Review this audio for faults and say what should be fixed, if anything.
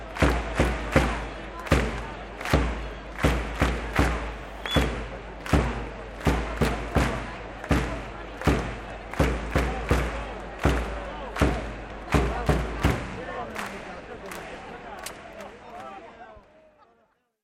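Nothing needs fixing: the signal stays stable throughout, and no technical fault can be heard anywhere in the recording.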